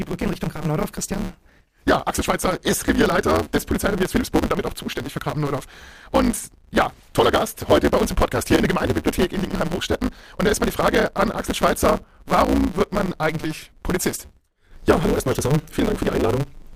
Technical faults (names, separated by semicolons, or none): block size mismatch (truncated)